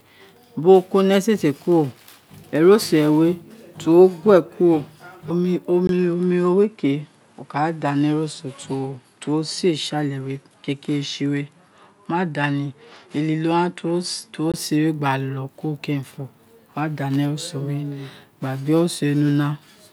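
The input likely switched to a poorer device at 5.87 s, after a brief silence of about 20 ms. Until 14.54 s the speech loses everything above 11.4 kHz, sounding duller and carrying a faint new background noise, while its level stays much the same.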